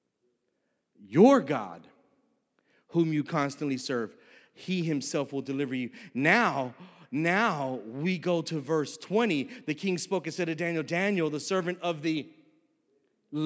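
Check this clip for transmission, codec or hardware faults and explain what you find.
Nothing stood out on listening to this speech clip; no transmission, codec or hardware problem could be heard anywhere in it.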